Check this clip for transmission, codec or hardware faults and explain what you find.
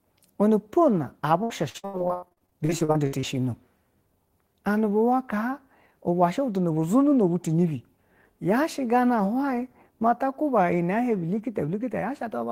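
One transmission fault is present. From 1.43 to 3.25 s there is repeated packet loss (robotic sound). Close to twenty short holes, the longest 90 ms, are each patched by stretching the preceding speech. About 38% of the stretch is filled this way, giving choppy speech with pieces missing.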